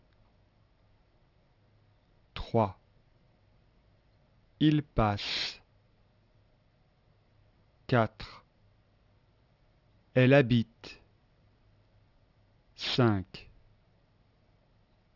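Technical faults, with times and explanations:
Throughout, aliasing. High-frequency content folds back into the audible band around 6 kHz. It lands at wrong, unrelated pitches that have no musical or natural link to the source. This fits a drop from 48 kHz to a 12 kHz rate without a proper low-pass filter first. The folded energy sits roughly 15 dB under the main sound. It gives the top end a gritty, metallic edge, and the spectrum runs hard up to 6 kHz.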